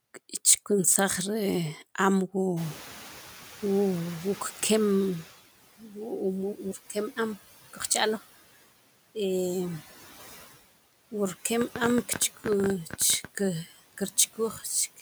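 Noise suppressor artifacts run through the whole clip. The suppressor pulls the background down by about 13 dB between phrases and lets it back up under the speech.

At about 2.5 s the room noise jumps by about 22 dB. This is the noise suppressor catching up. From 2.56 to 5.32 s its noise estimate trails the jump, so the louder noise comes through with less reduction at first. Over 2.76 s it sinks by about 10 dB as the estimate adapts.

At 5.8 to 5.96 s, and again at 14.53 to 14.65 s, speech is cut by the noise suppressor. Each time it mistakes part of the speech for noise. It lowers roughly a tenth of a second by up to about 8 dB, so those sounds come out swallowed and faint.

From 11.62 to 13.26 s a train of clicks rides over everything, pauses included. About twenty similar pops arrive unevenly, near 13.5 per second, and stand well above the speech. Interference from nearby equipment or a faulty connection is the likely cause.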